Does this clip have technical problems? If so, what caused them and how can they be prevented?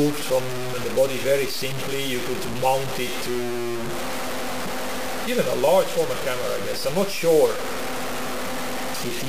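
Yes. Throughout, the sound carries grainy distortion that follows its level, with quiet parts sputtering out. This is low bit depth without dither, likely truncation to a 4-bit quantiser, leaving error only about 10 dB below the signal. The waveform shows stair steps, and the spectrogram shows broadband hash that rises and falls with the sound. To prevent it, keep at least 16 bits and add dither before any bit-depth reduction.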